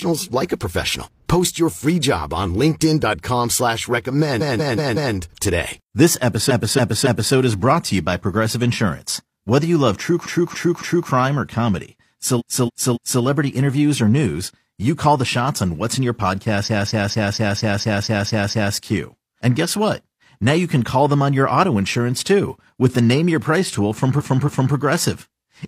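Repeated frames occur at 4.37, 6.46, 10.22, 12.36, 16.63 and 24.15 s. Each time, a block of speech 0.19 to 0.28 s long replays two to nine times, stuttering. Unlike a dropout, it adds time.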